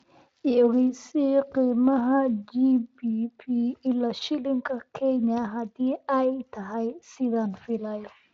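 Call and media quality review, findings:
No faults found in this speech recording.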